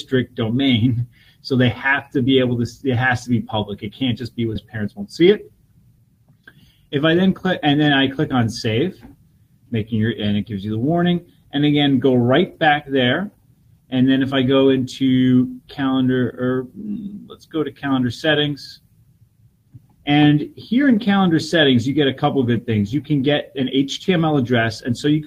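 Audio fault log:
4.55–4.57 s, skip ahead: roughly a second of audio is missing, and playback jumps straight from the material before the cut to the material after it with no fill. The two sides butt together, so the sound lurches forward abruptly rather than pausing.
4.75–6.00 s and 6.44–8.67 s, jitter buffer speed-up: the receiver trimmed short pitch-period pieces in quick succession to drain excess buffered delay, about 100 ms and then about 150 ms. Playback runs at 109% and 107% at unchanged pitch, sounding noticeably hurried.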